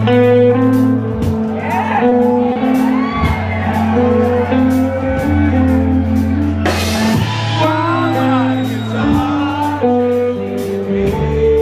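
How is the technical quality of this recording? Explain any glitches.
Two brief hitches mar the sound, both short stalls from a late packet. At 2.09 to 2.13 s and again at 2.53 to 2.58 s, the sound hangs with a slight buzz or dip. Each time a packet arrived late and the jitter buffer emptied, so the receiver stretched the last sound by 20 ms and then 30 ms, and resumed where it left off.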